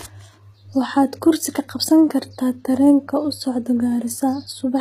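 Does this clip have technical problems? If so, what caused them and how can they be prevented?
Yes. Throughout the speech, s sounds come across gritty and lispy, with a metallic sheen in the treble, the plainly audible damage of HE-AAC compression, likely HE-AAC v2 at a rate that fits roughly 20 kbps. Only the lower spectrum is truly coded; the upper bands are copied up from below and shaped coarsely, so their harmonics no longer match. On a spectrogram, the treble shows blocky, repeated patterns and nothing at all above 14.9 kHz. Encoding at a higher bitrate with plain AAC, or keeping a lossless master, would prevent it.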